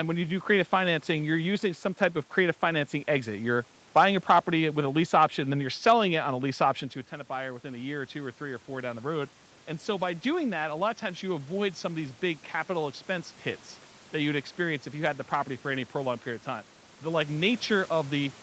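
From 7.29 to 12.1 s, automatic gain rising: the gain control, finding the input about 10 dB quieter after the talker moves away around 7 s, slowly adds about 6 dB, so speech and room noise swell together between "option to a tenant" and "big capital expense hits".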